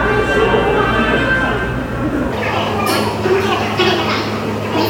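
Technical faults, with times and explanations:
2.33–4.89 s, section at the wrong speed: from 2.33 s to the end the sound runs 1.78 times too fast, so it turns hurried and jumps up by about ten semitones at once. The likely cause is playback or an edit tied to the wrong clock. On a spectrogram, every band in this stretch shifts sharply upward and events compress in time. In the waveform, cycles pack closer together and transients arrive faster than before the change.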